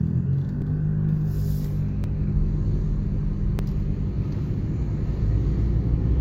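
At 0.62 s, 2.04 s and 3.59 s there is a repeated buffer: fresh audio arrived late, so the device replayed its previous block once, with essentially nothing lost. Each repeat lasts about 10 ms, fitting a 10 ms buffer, and the hard joins make it a brief click.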